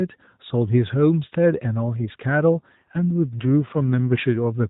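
From 2.54 to 4.22 s the speech turns rougher and more synthetic without any gap, an AMR rate drop that fits 12.2 falling to 5.9 kbps.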